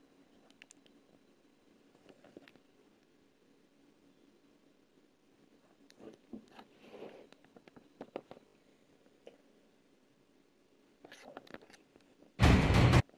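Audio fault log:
3.12 s and 8.48 to 8.54 s, repeated buffer: a brief buzzy stutter, with one extra repeat at 3.12 s and three at 8.48 s, and a hard join at each. New audio arrived late, so the last block, which fits a 20 ms buffer, replayed; essentially nothing is lost.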